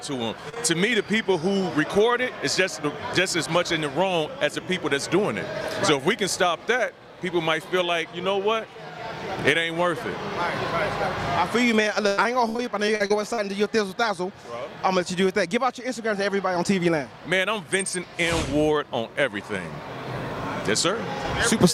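Right at the start there's short concealed packet loss: two back-to-back holes at about 0.49 s and 0.54 s, roughly 40 ms and 20 ms missing, where the receiver stretched out the preceding sound to cover the gap, so you get a quick smear and wobble before the real audio blends back in. Later, from 12.08 s to 13.40 s, it turns into repeated packet loss with that robotic sound: nine separate dropouts, the longest around 98 ms, with about a quarter of the stretch patched over, so it comes out choppy as each hole is filled and the next one arrives.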